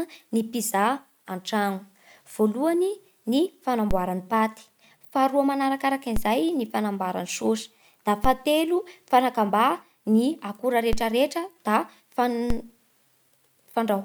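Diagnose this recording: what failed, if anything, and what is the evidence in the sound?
Five low thumps land under the speech at 3.91, 6.16, 8.24, 10.93 and 12.50 s while the speech carries on untouched. Each is a DC step of about -13 to -14 dBFS, likely from a converter recalibrating or an input with an offset being switched in: the zero line jumps, then a 5 Hz high-pass bleeds it away.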